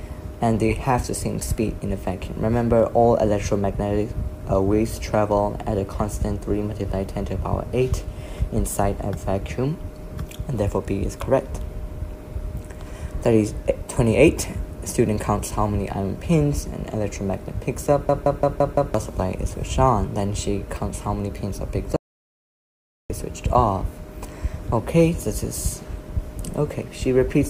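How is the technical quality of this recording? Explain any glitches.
The recording has two clear technical faults.

From 18.09 to 18.94 s there is a system hang loop. The system stalled while the hardware kept replaying its buffer. One 0.17 s slice repeats five times, a machine-gun stutter at about 5.9 Hz. This fits an 8192-sample buffer. Roughly a second of audio is lost.

From 21.96 to 23.10 s there is an audio dropout to silence. The sound cuts off abruptly into silence, with no room tone, for 1.14 s. The likely cause is a lost input that left the recorder writing silence. Whatever happened there is gone.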